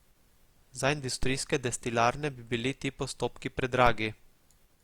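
At 1.23 s a DC step shifts the waveform's zero line, heard as a low thump; the offset holds until 3.87 s, where it steps back with another thump.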